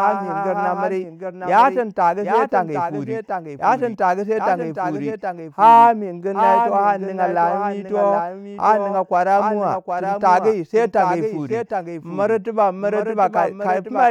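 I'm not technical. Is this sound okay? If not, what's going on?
No. Throughout the speech there is a doubled audio track: a slightly quieter copy repeats everything about 0.7 seconds late, likely from the sound being captured twice. Unlike a room echo, it never fades.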